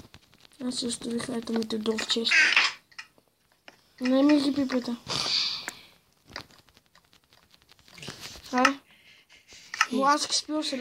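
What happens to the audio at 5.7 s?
At 5.69 s a sharp snap cuts in on top of the sound. It is an electrical switching spike, lasting only about 5 ms. Its peak reaches roughly -15 dBFS. The cause is likely a nearby switch, motor or static discharge. That event throws a brief arc, and the audio line picks up the burst of interference. The result is a snap laid over the audio, not a gap in it.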